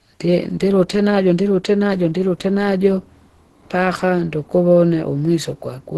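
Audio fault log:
throughout, Opus compression: the speech sounds muffled, hoarse and grainy with heavy codec damage, and nothing is present above 12.1 kHz. This likely comes from a very low rate, around 12 kbps, where the encoder switches to its hybrid speech mode and narrows the bandwidth.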